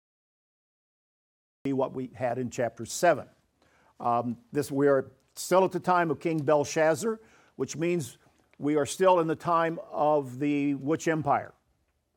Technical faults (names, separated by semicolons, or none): cut-off start